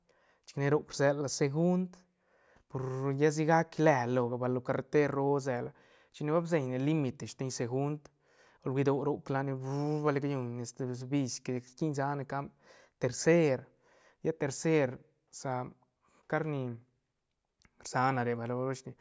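No technical faults can be heard anywhere in this speech recording.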